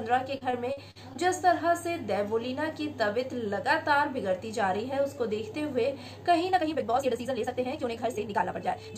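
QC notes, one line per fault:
0.37–1.17 s, repeated packet loss (robotic sound): packets went missing or arrived too late, leaving five gaps, the longest about 46 ms. Each hole was filled by extending the preceding sound, so roughly a fifth of this stretch is patched, giving choppy audio with fragments absent.
6.50 s to the end, time-stretched section: the audio runs about 1.86 times faster while pitch holds steady, likely from software squeezing the passage to fit a shorter length by dropping short pieces. The pace jumps abruptly, and the sound turns rushed.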